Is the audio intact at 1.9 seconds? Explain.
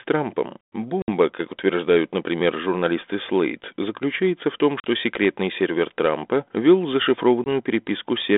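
Yes, at 1.9 seconds the speech is intact, with no dropout, click or distortion, only the narrow telephone band of about 250 Hz to 3.6 kHz that fits a 32 kbit/s G.726 ADPCM link.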